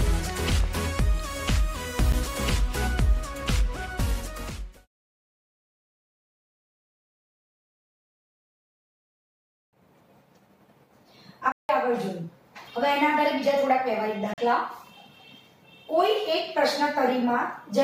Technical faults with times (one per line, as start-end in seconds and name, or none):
2.12 block of digital silence
9.56-9.73 block of digital silence
11.52-11.69 block of digital silence
14.34-14.38 block of digital silence